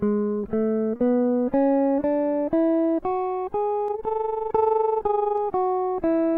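A music clip with two faults. At 0.96 to 1.00 s, about 30 ms of audio went missing in transit, and short concealed packet loss filled the gap by extending the preceding sound, leaving a brief smear. From 3.88 to 5.39 s, frames were overlapped and added back without constant gain, so overlap-add ripple pumps the level by about 11 dB at around 20 Hz, a fast, rough flutter.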